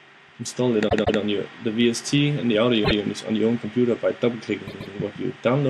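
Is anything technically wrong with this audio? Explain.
Yes. Repeated frames occur at 0.88–1.19 s, 2.84–2.99 s and 4.66–4.93 s: runs of compressed frames were replayed, causing a stutter where 157 ms, 157 ms and 131 ms blocks repeat.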